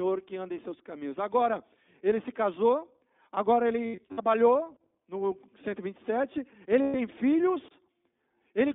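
iLBC codec, throughout the speech: the whole clip carries the slightly rough, synthetic texture of this narrowband VoIP coder, and the damage is plainly audible. The passband runs only from about 200 Hz to 3.6 kHz, so sibilants lose their edge and the voice sounds boxed in. iLBC codes the excitation of each 20 ms frame on its own, and the coarseness heard here fits its 15.2 kbps mode.

Lost iLBC frames, from 3.86 to 4.20 s: about 180 ms of audio is missing, scattered as several dropouts across roughly a third of a second. The longest single gap is around 70 ms. In each gap the decoder repeats the last pitch cycle blended with noise, so the speech turns into a brief held, buzzy vowel. Because every iLBC frame decodes independently, the voice returns cleanly as soon as packets arrive again.

Lost iLBC frames, from 6.82 to 6.96 s: a 120 ms loss, six 20 ms frames. The concealment stretches the preceding pitch period into a sustained, breathy tone. 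The smooth, droning filler is what gives away a packet loss rather than a pause in the speech. Normal speech resumes almost immediately afterwards.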